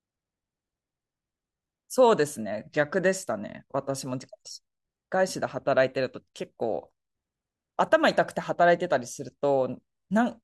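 Nothing in this speech recording stands out as a technical fault; there's nothing here to flag.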